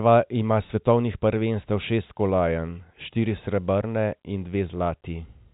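No technical faults are audible anywhere in the recording.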